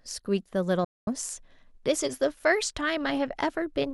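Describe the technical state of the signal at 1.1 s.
At 1.1 s the sound has only just come back from a digital broadcast dropout running from 0.84 to 1.08 s. The receiver lost good frames and muted, snapping to silence with a roughly 3 ms fade. About 224 ms of the speech is simply gone, which fits around seven lost frames.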